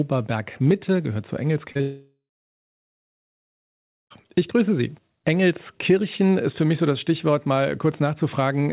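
At 1.72 s the audio stops arriving on time, giving two back-to-back short concealed packet losses: about 40 ms missing from 1.72 to 1.77 s, then another 20 ms from 1.77 to 1.81 s. The receiver covers each hole by extending the last stretch of sound for roughly 32 ms and then 19 ms. The result is a quick smear and wobble lasting under a tenth of a second.

Right after, at 1.81 s, the sound breaks off for a long stretch. This is likely a long network dropout, with about 2.3 s of audio never delivered. The receiver first stretches the last sound into a fading buzz or hiss for a few tenths of a second. That gives way to about 1.9 s of silence before the audio resumes at 4.12 s, with the lost portion simply absent. Throughout, the sound is band-limited with nothing above 4 kHz, which fits a 64 kbps G.711 call path.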